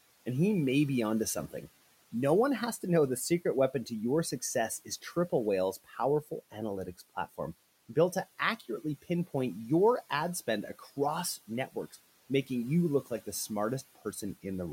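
Between 5.73 and 5.99 s the speech dips by about 17 dB and sounds swallowed, and again at 10.79 to 10.88 s, just after "pinpoint your ad spend", it drops by about 10 dB. This is speech cut by the noise suppressor, which mistook brief stretches of speech for noise and turned them down along with the room noise that sits about 23 dB below the speech.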